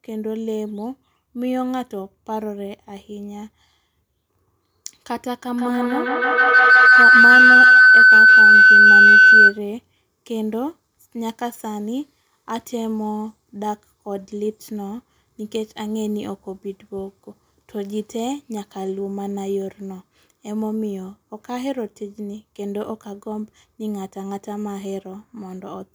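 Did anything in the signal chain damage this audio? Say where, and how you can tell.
Yes. From 5.53 to 9.65 s a shrill tone, somewhere around 1.5 kHz, swells until it peaks about 14 dB above the speech, pulsing roughly every 150 ms. This is feedback howl arising at the call stage: two devices sharing a room are closing an acoustic loop, so each pass through microphone and loudspeaker returns louder, narrowing onto the frequency the loop favours and throbbing at its round-trip delay until the loop breaks.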